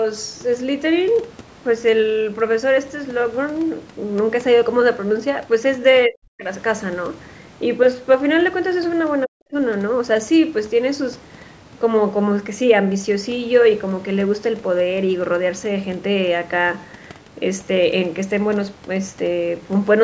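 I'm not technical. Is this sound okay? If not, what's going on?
No. The speech nearly vanishes twice, from 6.08 to 6.48 s and from 9.26 to 9.56 s. Each gap lasts under half a second, and the voice drops almost to silence. This is speech suppressed in double talk. The likely cause is that both people on the call spoke at once. The call's echo canceller could not tell this talker apart from the echo of the other person, so it turned everything down for a moment.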